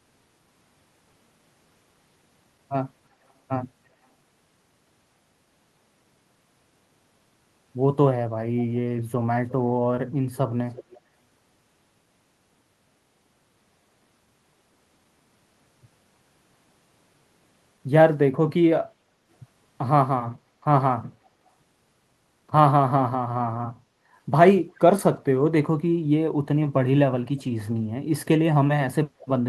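An echo canceller on the far end likely let loudspeaker pickup through, causing echo leak: faint delayed copies of the speech, about 0.35 s behind, at 10.73–10.98 s, 21.24–21.29 s (barely audible) and 29.20–29.26 s.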